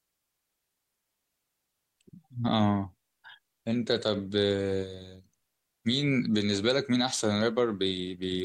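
No technical faults can be heard anywhere in this speech recording.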